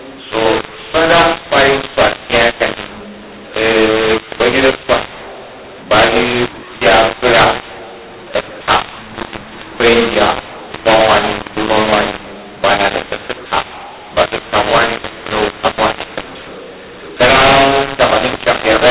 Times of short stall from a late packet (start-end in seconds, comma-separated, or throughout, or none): none